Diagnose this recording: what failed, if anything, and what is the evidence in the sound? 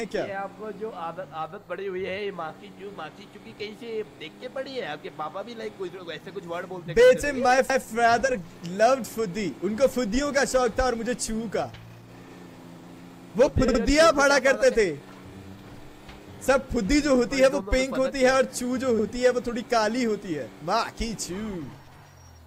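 Repeated frames at the codec or storage stage. At 7.70 s a 160 ms stretch of sound plays twice in a row, which fits a run of five 32 ms compressed frames written again, and at 13.68 s a shorter 64 ms block repeats twice more, which fits two frames. Each restart is audible as a stutter. Together the repeats lengthen the playback by 288 ms.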